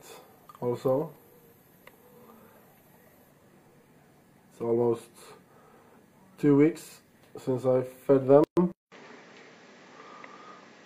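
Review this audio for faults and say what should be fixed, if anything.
There's a gap at a join of encoded pieces from 8.44 to 8.57 s, about 132 ms of dead air with smeared edges. Two separately encoded chunks were butted together with the encoder's start delay and end padding left in. Trim that priming and padding, or encode the whole thing in one pass, when joining.

Then at 8.72 s the sound drops out for 200 ms and comes back duller through to the end, with nothing above 7.6 kHz, a level change of about 5 dB and a faint new noise floor. It's likely the input switched to a poorer device. Lock the input device for the whole session so the system can't hop to another mic or a headset profile.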